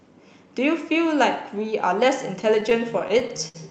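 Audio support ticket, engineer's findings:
Repeated stalls (stutter), 2.41 to 3.57 s. Speech drags through about a dozen brief holds, longest 63 ms, roughly 15% of that span. Jitter buffer underruns. Late packets let it run dry. Receiver extends the last sound. Nothing dropped.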